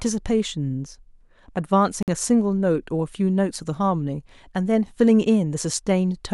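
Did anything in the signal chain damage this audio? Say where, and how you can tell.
Yes, a corrupt frame was decoded at the codec. Flipped bits across a couple of frames misplaced spectral energy, heard as a glitch from 2.03 to 2.09 s.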